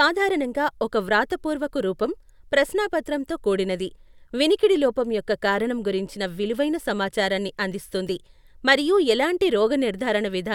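A recording of speech, with nothing technically wrong to report. No faults can be heard at any point in the audio.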